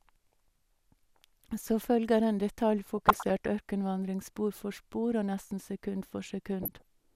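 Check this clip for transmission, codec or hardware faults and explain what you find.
The speech carries two bursts of DAB burbling, from 2.83 to 3.46 s and from 6.63 to 6.85 s. Weak reception lets a small fraction of bit errors, well under one percent, slip past error correction into the MP2 stream. Corrupted scale factors and samples then throw individual sub-bands up or down in level frame by frame, which sounds like short noise blips and sudden level jumps in single sub-bands over the voice. On a spectrogram this shows as scattered rectangular blocks of energy confined to single sub-band strips and flickering at frame rate. The waveform shows short, irregular level jumps in those stretches.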